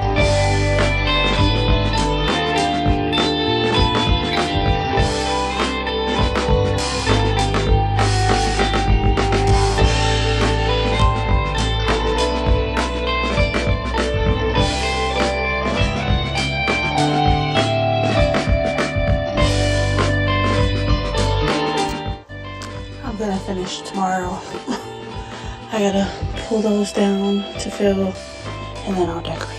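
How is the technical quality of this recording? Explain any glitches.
The recording has one fault running throughout: a rough, slightly doubled colouring from channel delay (comb filtering), where one channel lags roughly 20 ms, carving evenly spaced notches starting near 30 Hz when summed.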